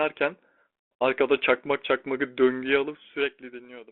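From 3.65 to 3.67 s, near the end of this G.726 telephone-band speech, bit errors on the ADPCM link upset the decoder's step size and predictor, likely within a single frame. The result is a brief rough pop, visible as a short broadband smear on the spectrogram and a jagged jump in the waveform.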